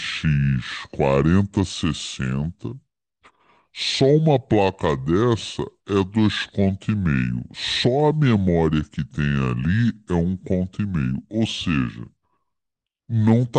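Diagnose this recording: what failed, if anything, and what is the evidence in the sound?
A wrong sample rate at the playback stage affects the whole speech clip. Everything runs at about 0.73 times normal speed, and pitch drops by about 5.5 semitones. Speed and pitch fall together, so the talker sounds low, heavy and sluggish from start to finish. There is no retiming or resampling. The samples are simply clocked out too slowly, which fits 44.1 kHz material played back at 32 kHz.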